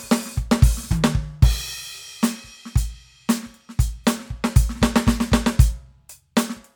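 No audible technical faults here.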